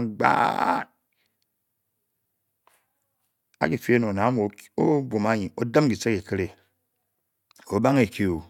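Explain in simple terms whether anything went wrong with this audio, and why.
Nothing went wrong with this speech recording, and no technical fault can be heard anywhere in it. The audio holds steady throughout, with nothing interrupting or altering it.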